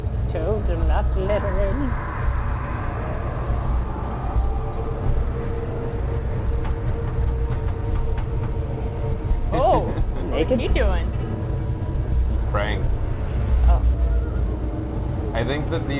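No technical faults can be heard in the audio, which comes through the narrow band of a telephone-style call path with nothing above 4 kHz, consistent with a G.711 mu-law codec at 64 kbps.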